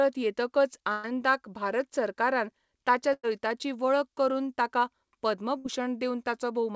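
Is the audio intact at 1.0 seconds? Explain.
No. A burst of packet loss from 0.92 to 1.05 s was concealed by extending and fading the prior sound, then speech resumes at "भारत सरकारान ताच्या", with about 120 ms missing.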